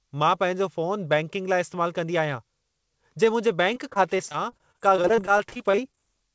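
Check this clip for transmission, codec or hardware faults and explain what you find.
One transmission fault stands out: repeated packet loss with robotic sound from 3.74 to 6.00 s in this speech. Short gaps of up to 23 ms recur throughout, and each is patched by extending the preceding sound. About a fifth of that stretch is concealed, which makes the speech choppy and robotic. A spectrogram shows smeared, repeated slices, and the waveform shows periodic copied segments. The call path itself has nothing above 8 kHz, which fits a wideband codec such as G.722.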